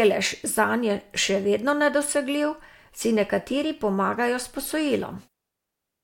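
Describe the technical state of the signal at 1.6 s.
The speech signal at 1.6 s is intact, with no audible technical fault at that moment.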